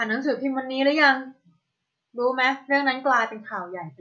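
Speech, with no technical faults to be heard.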